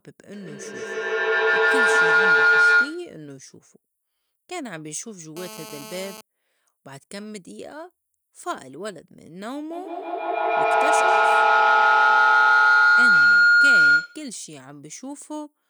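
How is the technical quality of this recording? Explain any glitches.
The recording has serious technical problems: two bouts of feedback howl and a short burst of GSM phone buzz.

From 0.33 to 3.22 s and again from 9.72 to 14.38 s, a piercing tone around 1.5 kHz rises to about 16 dB above the speech, with the loop repeating roughly every 150 ms. This is feedback howl. A loudspeaker's output re-enters a microphone in the same room, and each trip around that loop adds level. The repeats grow instead of dying away, and they narrow onto the frequency the loop favours until only the howl remains.

Between 5.37 and 6.21 s, a harsh, raspy buzz sits under the speech at about 4 dB below it, steady and unrelated to what is being said. This is GSM phone buzz. A nearby 2G handset on a call transmits in bursts 217 times a second, and the audio circuitry rectifies those radio pulses into an audible 217 Hz tone with a dense stack of harmonics.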